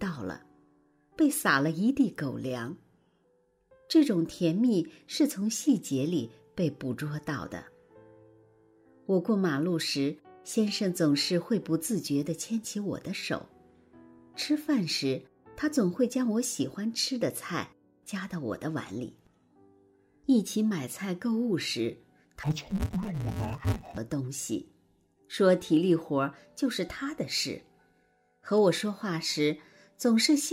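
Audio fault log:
22.43–23.98 s, interleaved audio read as planar: short 5.8 ms blocks, fitting 256-sample buffers, turn the sound dull and robotic with a 172 Hz buzz at the block rate.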